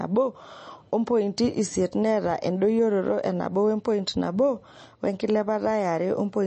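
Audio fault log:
throughout, MP3 compression: nothing above 8.4 kHz, and s sounds turn watery and swirling; unlike plain filtering, faint detail flickers, likely from a low-bitrate encode around 32 kbps.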